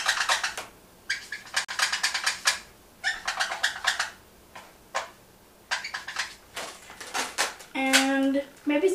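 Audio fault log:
1.65–1.69 s, Bluetooth stall: the sound drops to silence for 40 ms, then resumes. The likely cause is radio interference delaying packets. The headphones' buffer emptied while they waited. Playback paused until the resent packets arrived, leaving this short gap.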